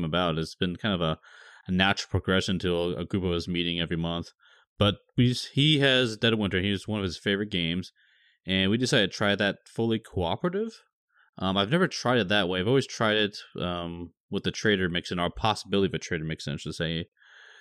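No technical faults can be heard anywhere in the speech. There is nothing to place on a timeline.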